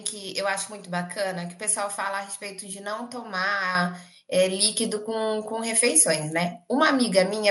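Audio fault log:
3.75 s and 4.77 s, microphone volume stepped up: the speech and the background noise floor jump louder together in a single step, by about 7 dB at 3.75 s and by 1 dB at 4.77 s. This happens when the call software raises the device's input volume at once rather than gradually. On a waveform the envelope widens abruptly at each point, and a spectrogram shows every band, quiet gaps included, brightening along a sharp vertical edge.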